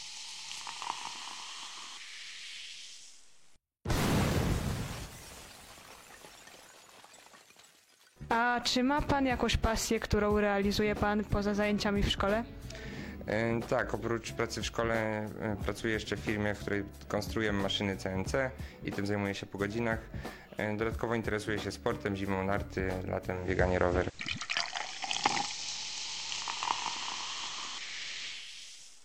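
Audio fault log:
23.30–28.53 s, digital radio blending to analogue: hiss rises well below the sound, level shifts about 5 dB, as reception crossfades to FM over 283 ms.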